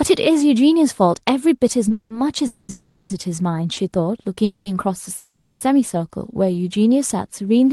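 At 1.88 to 1.91 s a packet arrived late and the jitter buffer briefly ran dry, producing a short stall from a late packet: the receiver held the last bit of speech about 20 ms too long, a faint buzzy smear, then carried on with nothing lost.

Straight after, from 1.92 to 2.13 s, a call audio freeze begins. The likely cause is packets held up in transit, so the buffer emptied and the receiver extended the last sound as a fading buzz for about 180 ms, the last 80 ms of it near silence. Two more freezes follow at 2.47 to 2.70 s, with a 220 ms buzzing hold, and 2.72 to 3.11 s, with a 380 ms hold ending in about 20 ms of quiet.

A second short stall, at 3.74 to 3.78 s, stretches the sound by about 30 ms.

Further freezes come at 4.45 to 4.67 s, a 210 ms fill with about 60 ms of silence, and 5.17 to 5.62 s, the longest, a 440 ms fill that decays into roughly 180 ms of silence. Each time the speech resumes where it stopped, so pauses are inserted and nothing is skipped.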